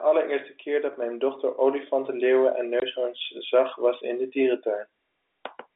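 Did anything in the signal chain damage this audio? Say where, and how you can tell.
Yes. Microphone volume stepped up at 1.02 s and again at 2.04 s, at the call-processing stage. The level jumps abruptly by about 4 dB, then by about 3 dB, and the speech and the background noise rise together in one step instead of swelling gradually. That shared, instantaneous jump means the call software's gain control judged the input too quiet and raised the device's input volume rather than the talker speaking louder.

Packet loss filled with silence from 2.80 to 2.82 s, in the network. A 20 ms hole cuts straight through the speech, with hard edges where the sound stops and restarts. The length fits a single lost 20 ms packet, and the receiver substituted silence instead of concealing the gap. The G.711 telephone coding on the line is heard only as the expected narrow telephone band.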